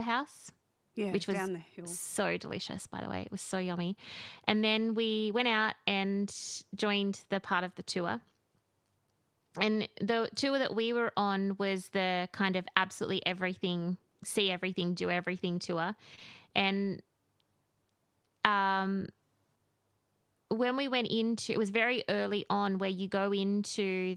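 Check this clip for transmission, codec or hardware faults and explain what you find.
Two short concealed packet losses sit back to back at 16.15 to 16.19 s and 16.19 to 16.23 s. About 20 ms went missing each time, and the receiver extended the preceding sound to cover it. The result is a brief smear rather than the silent gap or hard click of a plain dropout.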